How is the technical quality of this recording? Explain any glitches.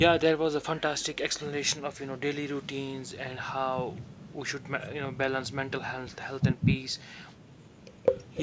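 No glitches: the speech shows the normal signature of call microphone processing, with the lowest bass trimmed by its high-pass filter and nothing above 8 kHz, neither of which counts as a fault.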